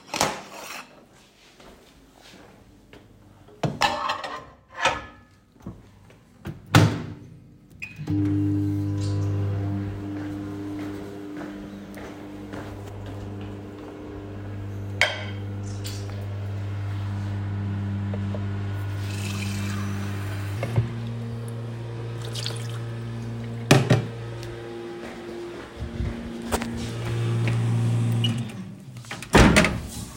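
From 20.57 s to the end of the clip, the audio is a section at the wrong speed. It runs about 1.16 times faster than the material before it, and the pitch rises with it by roughly three semitones, so everything in that stretch sounds higher and more hurried. The change arrives abruptly at 20.57 s rather than drifting in. The likely cause is that this portion was resampled or played against the wrong clock.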